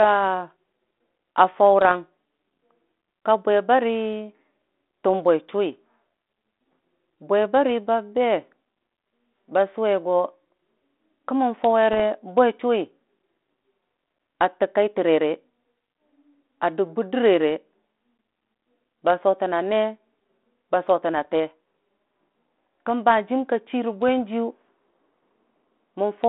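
Bit errors on an ADPCM link hit at 1.81–1.92 s, 11.93–12.04 s, 21.16–21.26 s and a lone click at 24.08 s. The flipped bits throw the decoder's step size and predictor off, so each one rings on briefly as rough pops with quick level jumps.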